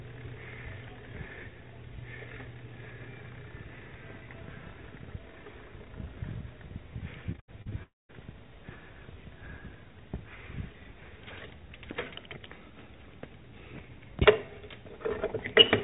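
From 7.32 to 7.73 s the sound turns choppy, with five short holes, the longest about 79 ms, covering roughly two fifths of that stretch. This is repeated packet loss (robotic sound): each missing piece is papered over by extending the previous sound.

At 7.83 s the audio briefly smears into a fading buzz and then falls silent for about 0.21 s, returning at 8.11 s with that portion gone. This is most likely a long network dropout, where nothing arrived and the receiver stretched the last sound before giving up. Throughout, nothing is heard above 4 kHz, as expected from the narrowband call codec.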